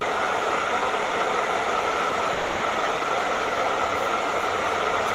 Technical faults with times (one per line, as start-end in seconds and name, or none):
2.33-2.63 call audio freeze